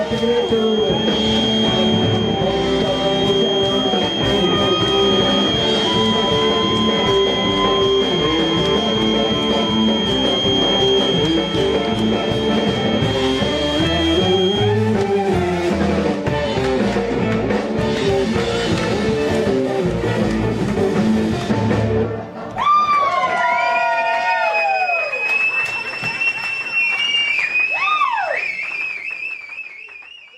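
A sound-reinforcement loop likely sitting right at the edge of instability, with the loudspeaker's output reaching the microphone at just enough gain to sustain one frequency without building further, produces a feedback whistle from the very start to 14.77 s. The result is a thin, steady tone at 3.2 kHz running behind the sound, only a few decibels below it, slowly swelling and fading in level as the loop hovers near its tipping point.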